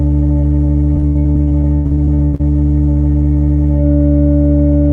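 In this music clip, packets were lost or arrived late again and again between 0.93 and 2.41 s, causing repeated packet loss (robotic sound). Around fifteen holes, the longest about 98 ms, were patched by stretching the preceding sound, covering nearly half that stretch and leaving the music choppy.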